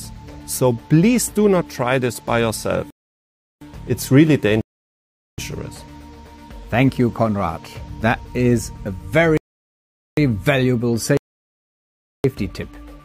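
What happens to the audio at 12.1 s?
At 12.1 s the audio is sitting in a rebuffering stall, silent from 11.17 s to 12.24 s. The player ran dry of downloaded data and just paused until more showed up, so the sound picks up exactly where it left off, nothing missing, with about 1.07 s of dead air added.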